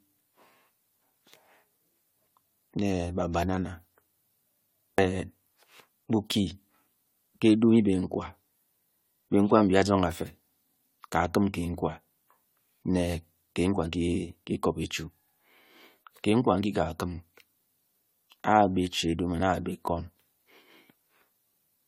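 Throughout the speech, the sound is swirly, smeared and hollow, with softened consonant attacks. This is generation loss, likely from about seven successive AAC-LC encodes at around 96 kbit/s, each requantising on a shifted frame grid so that noise and spectral holes accumulate. Content extends up to 20.1 kHz.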